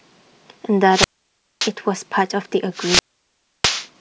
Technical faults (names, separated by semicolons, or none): wireless microphone squelch dropout